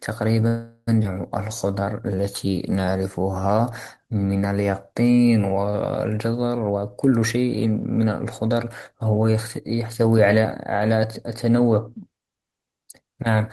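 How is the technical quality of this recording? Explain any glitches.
The recording has four timing glitches in the speech, all typical of a call over an unsteady network.

From 0.47 to 0.89 s there is a call audio freeze. The last sound is stretched into a fading buzz with a brief silence, likely because packets stalled and the jitter buffer ran dry.

From 1.03 to 1.06 s the playback makes a skip ahead. About a fifth of a second of speech vanishes, and the two sides are spliced almost seamlessly after that stretch was dropped.

From 1.48 to 3.53 s a jitter buffer slow-down drags the speech to 89% speed at unchanged pitch. Repeated pitch periods add 224 ms to rebuild the buffer's reserve.

From 6.60 to 8.93 s a jitter buffer speed-up hurries the speech to 116% at the same pitch. Removing short pitch periods trims about 0.4 s of excess delay.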